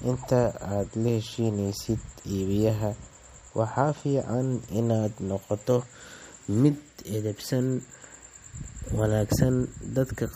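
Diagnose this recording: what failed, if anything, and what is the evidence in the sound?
Codec stage, likely MP3 compression: throughout the speech, plainly audible watery swirl and smeared attacks, which fits a low bitrate around 48 kbps; the spectrogram shows a flat ceiling at 15.2 kHz with flickering holes below it.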